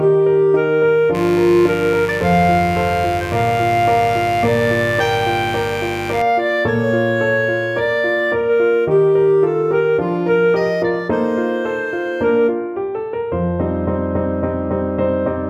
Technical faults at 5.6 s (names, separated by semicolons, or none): mains buzz